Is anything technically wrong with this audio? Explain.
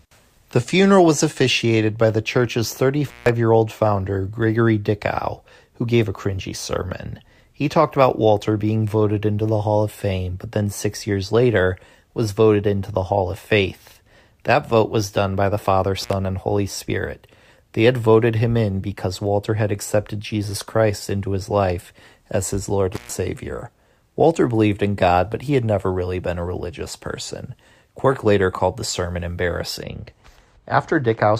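Yes. Intermittent contact at 3.07–3.29 s, 16.01–16.13 s and 22.93–23.12 s: a loose connection briefly opens, so the speech drops out for about 160, 58 and 128 ms, with crackle at each edge. The first falls between "officiated by the church's" and "year old founder".

De-emphasis applied wrongly from 29.83 s to the end, just after "later called the sermon": an unneeded treble cut slopes the response down about 14 dB at 10 kHz relative to 1 kHz, leaving the speech dull and muffled.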